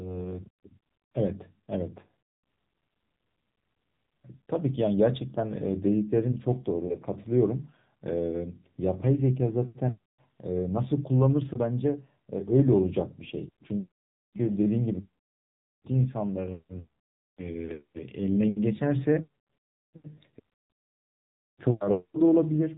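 Throughout, the speech has passed through the AMR narrowband mobile codec, likely at a low mode near 7.4 kbps, which discards everything above 4 kHz and rebuilds the voice from a vocal-tract model fed sparse pulses, leaving it muffled, plainly buzzy and synthetic.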